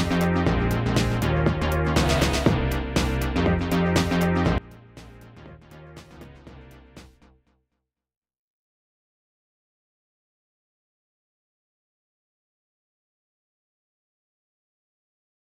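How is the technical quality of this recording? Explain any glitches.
The quality is compromised from 4.58 s to the end. One channel inverted, from 4.58 s: the level drops by about 22 dB, leaving a faint residue, likely because reversed polarity cancels centred content when the channels sum to mono.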